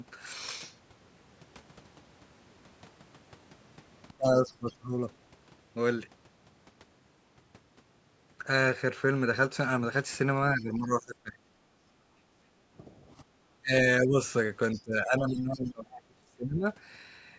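From 4.09 to 4.88 s the speech sinks by around 30 dB, which is likely speech suppressed in double talk: the echo canceller couldn't tell the talker from loudspeaker echo and turned everything down. Inside that stretch, at 4.46 to 4.53 s, there's a faint scrap of a second voice, about 25 dB under the talker, likely the other side's voice leaking through from a loudspeaker the canceller didn't fully clean out.

The same double-talk ducking likely returns at 10.55 to 11.4 s, dipping around 20 dB. Then from 11.68 to 12.5 s the room tone drops about 13 dB and comes back, which is background gated by the echo canceller clamping the mic while the loudspeaker played. From 12.78 to 14.18 s the speech is pulled down again, around 25 dB in spots, likely double-talk suppression, with a quick gating dip of about 17 dB in the background at 13.25 to 13.31 s.

Last, from 14.73 to 15.69 s a second voice, about 30 dB down, likely leaks through, while the talker is squashed by around 25 dB from 14.75 to 16.67 s, likely the same double-talk suppression. 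Nothing sits above 8 kHz, which fits the call's microphone processing.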